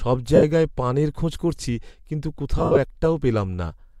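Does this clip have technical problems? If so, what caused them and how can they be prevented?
Yes. Lost LE Audio frames smear the speech into noisy hiss at 0.36–0.43 s and, scattered, at 2.58–2.77 s. The decoder repeated the last spectrum with random signs, fading it. A stronger Bluetooth link with fewer obstructions prevents this.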